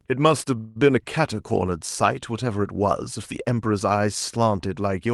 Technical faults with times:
0.57-0.77 call audio freeze

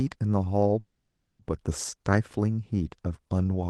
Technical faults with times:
0.79-1.41 call audio freeze

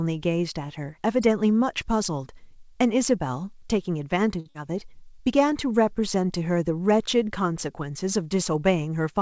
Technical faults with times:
4.40-4.47 short stall from a late packet
4.49-4.56 burst of packet loss

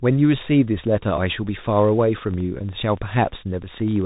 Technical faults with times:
0.00-4.05 Bluetooth CVSD headset codec
0.84-4.02 train of clicks
3.63 Bluetooth headset packet repeated

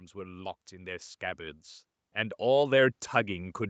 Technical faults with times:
0.12-1.20 automatic gain rising
2.00-3.04 automatic gain rising

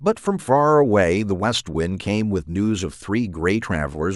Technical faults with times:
none

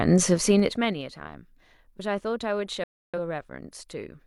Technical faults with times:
0.30-1.03 zipper noise
2.84-3.18 digital broadcast dropout

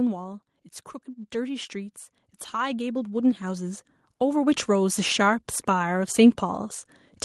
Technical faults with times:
1.30-5.09 automatic gain rising

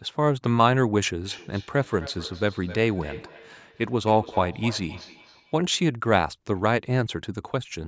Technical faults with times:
1.25-5.61 feedback echo between two devices

